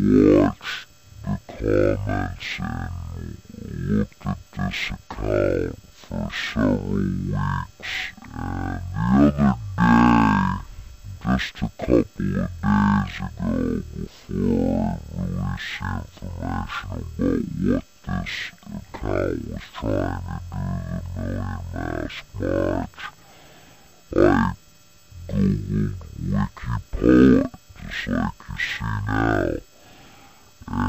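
From the first moment to the end, the audio runs at half speed and sits a full octave, 12 semitones, low. This is stereo read as mono: the player takes the alternating left and right samples as one continuous channel, so every stereo frame becomes two consecutive mono samples, which doubles the duration. A simple sample-rate mismatch would also slow and deepen the sound, but here a fainter mirrored copy of the sound also fills the upper half of the spectrum.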